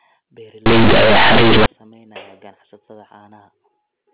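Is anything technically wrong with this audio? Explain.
Yes. From 0.66 to 1.66 s there is companded audio read as linear: the speech there was stored as mu-law bytes but played back as plain linear 8-bit samples, with no expansion. Because mu-law packs sign and a logarithmic level into each byte, every sign change flings the output across roughly half its range, so soft and loud parts come out equally huge and the waveform is badly warped. For that second the speech turns into very loud, buzzy distortion with heavy noise filling the pauses. Around it, the audio has the narrow telephone sound of G.711 coding, with nothing above 4 kHz, which fits 8 kHz sampling.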